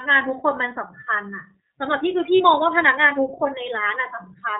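The speech has passed through the iLBC codec, a narrowband VoIP coder that encodes each frame's excitation independently of the one before. Everything above 4 kHz is gone, and the codec damage is plainly audible: the voice comes through clear but slightly rough and synthetic, with a dull, band-limited top end. The sound fits iLBC's 13.33 kbps mode with 30 ms frames. From 2.37 to 2.41 s, lost iLBC frames interrupt the stream for about 30 ms, consistent with a single dropped packet. The decoder filled the hole by repeating the last pitch cycle blended with noise, so the gap sounds like a brief held, faintly buzzy vowel rather than silence. Because iLBC frames are self-contained, the voice recovers cleanly right after, with no lingering smear.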